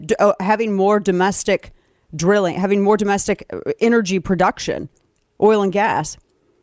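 No technical faults can be heard anywhere in this speech recording.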